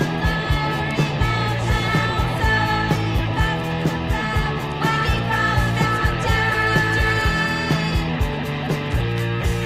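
No technical faults occur at any point in the clip, so there is nothing to describe in time order.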